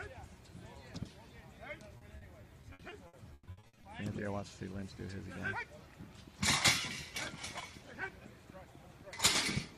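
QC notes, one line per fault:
1.97–3.85 s, repeated packet loss (robotic sound): the audio turns choppy, with about a dozen short dropouts, the longest near 140 ms. Lost or late packets leave holes patched by extending the preceding sound, covering roughly a third of this span.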